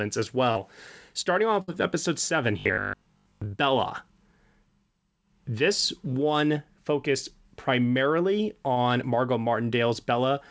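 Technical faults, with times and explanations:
0.52–0.58 s, short concealed packet loss: About 40 ms of speech never arrived, and the receiver bridged roughly 36 ms of it by extending the preceding sound before blending back into the real signal. The result is a brief smear or wobble rather than a hole. Unlike the later burst, the patch is too short to fade or settle into a steady buzz, so the sound keeps moving and only a small piece of detail is lost.
1.62–1.70 s, burst of packet loss: Here about 60 ms went missing in one run, all of it filled by concealment. Over that longer stretch the continued sound has time to become a held buzz or hiss that sags in level. The speech then picks up further along, with the in-between portion simply absent. The length, the steady held quality and the audible jump when the real audio returns set it apart from the brief smears of the short losses.
2.60–3.56 s, robotic sound from repeated short buffers: For nearly a second the speech takes on a rigid, metallic buzz at about 50 Hz. 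That rate corresponds to one 20 ms chunk being replayed over and over, and something like two-thirds or more of this stretch is repetition rather than fresh audio, most likely because new data was reaching playback too seldom. The speech still follows its rough contour, but the fixed pitch underneath it gives it away. That sustained, stable tone is what distinguishes it from a packet-loss burst, which fades and then resumes.
8.74–8.78 s, short concealed packet loss: Just after "one focused primarily", a 20 ms gap is covered entirely by continuation of the previous sound. It comes through as a momentary smear or wobble. This is the shortest dropout in the clip, too brief to develop into the held buzz or fade of a burst.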